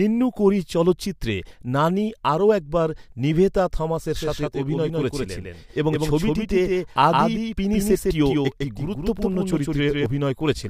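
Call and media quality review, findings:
Doubled audio track, 4.16–10.06 s: full-band copy trailing by about 150 ms, about 5 dB down, starting and stopping abruptly; waveform shows offset repeated envelopes. Likely duplicate capture path.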